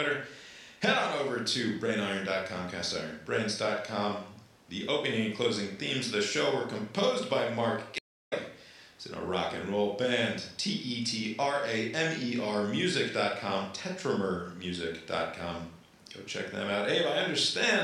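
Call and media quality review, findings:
Stream reconnect, 7.98–8.33 s: speech cuts out for 330 ms, then resumes about 0.3 s further on, skipping a chunk. Connection dropped; player reconnected and started a fresh decoder mid-stream while the live feed kept moving.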